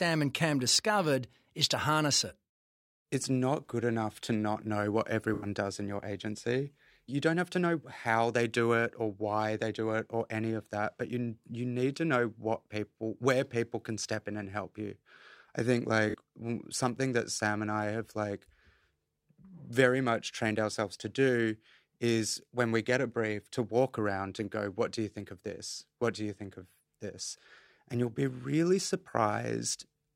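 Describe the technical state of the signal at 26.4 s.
At 26.4 s the speech signal is intact, with no audible fault at that moment.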